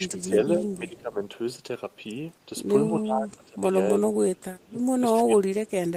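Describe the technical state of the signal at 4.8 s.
At 4.8 s the signal is in the last moments of speech suppressed in double talk, which runs from 3.96 to 4.82 s. The speech dips sharply, at its deepest around 25 dB down, with most of that span affected. The likely cause is an echo canceller that, faced with both sides talking at once, could not tell the local talker from loudspeaker echo and turned everything down together.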